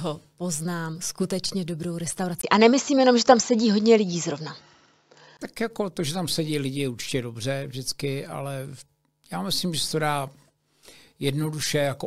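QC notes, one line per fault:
2.41–5.39 s, input likely switched to a poorer device: 20 ms gap, nothing above 7.6 kHz, level steps about 5 dB, new noise floor far below the signal; flat ceiling on the spectrogram, step in the waveform.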